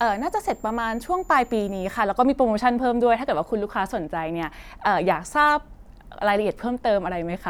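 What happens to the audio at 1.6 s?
At 1.6 s the audio is inside a switching supply whistle that runs from the start to 2.0 s. A switching power supply is cycling at an audible rate, so a thin high tone near 7 kHz, wandering between about 6.94 and 7.44 kHz, sits about 35 dB below the speech.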